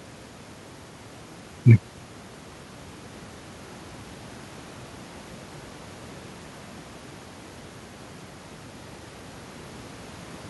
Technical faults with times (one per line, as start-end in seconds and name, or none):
none